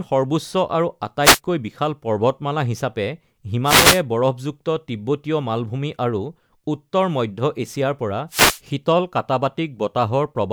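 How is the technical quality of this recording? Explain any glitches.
Three brief wireless microphone noise hits, at 1.22–1.40 s, 3.64–4.02 s and 8.29–8.61 s, mar the speech. Each is a swish of static as the FM radio signal fades and receiver hiss swamps it. Unlike a digital dropout, which falls silent, the signal fills with noise.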